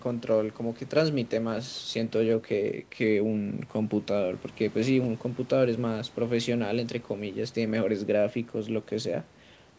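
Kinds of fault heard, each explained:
No faults detected; the speech shows the expected band limit of a wideband call path, with nothing above 8 kHz, consistent with G.722 coding after normal call microphone processing.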